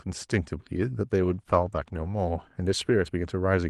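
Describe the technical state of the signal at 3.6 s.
At 3.6 s the audio is inside a call bitrate drop that begins at 1.23 s and runs to the end of the clip. The call's bandwidth estimate fell, so the Opus encoder went from 32 kbps to 16 kbps, holding the lowest rate for about 1.17 s. With half the bits, the speech is coded more coarsely and sounds rough and watery. On a spectrogram the harmonics look blotchy and smeared, and the upper band thins compared with the sharper detail before 1.23 s.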